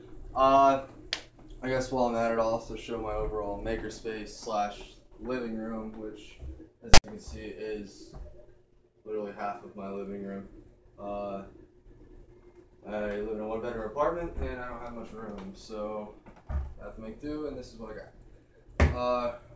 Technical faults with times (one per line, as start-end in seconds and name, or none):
6.94-7.04 file tags played as audio